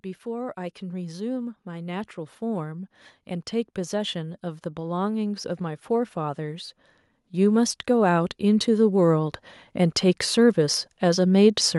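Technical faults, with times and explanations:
0.23–2.97 s and 3.74–9.41 s, automatic gain rising: the gain control judged the input too quiet and raised its gain slowly, by about 6 dB and then about 10 dB, so voice and background swell together. The waveform envelope widens steadily while the spectrogram brightens evenly across all frequencies.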